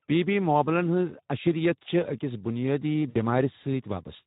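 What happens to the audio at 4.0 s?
At 4.0 s the speech is still running through the Speex codec damage that covers the whole clip. The sound points to a low bitrate around 11 kbps, leaving the CELP coder too few bits for the excitation, so the speech comes out plainly noisy and hoarse.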